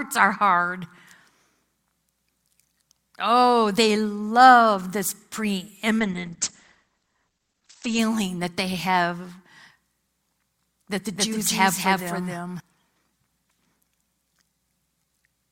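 It's a speech clip, and two things go wrong in it. From 5.99 to 7.99 s, just before "that they have", there's an adaptive stream at a lower bitrate: the treble suddenly vanishes above 8.7 kHz and the sound turns grainy, with no gap, which fits the stream dropping from roughly 64 to 16 kbit/s Opus while the connection slowed. Then, right after "that the", from 11.16 to 12.60 s, you get a doubled audio track: a full-band copy at about the same level trails by roughly a third of a second, dry with no room tail, and cuts in and out abruptly, likely a second capture through a slower path.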